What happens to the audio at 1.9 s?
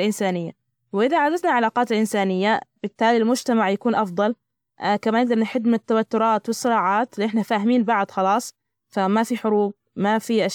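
At 1.9 s the speech runs on cleanly, with no dropout, click, distortion or other fault to be heard at that point.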